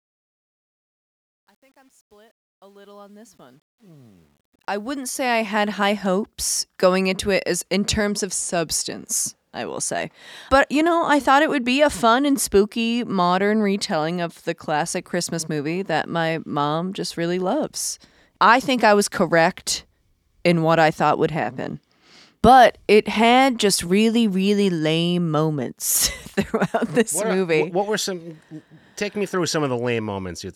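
From 0 to 5.82 s the fade-in shows truncation distortion: the gain stage drops low bits without dither, consistent with roughly 10-bit resolution. Up to 4.13 s the quiet speech is gritty, clearing before "hopes going into it".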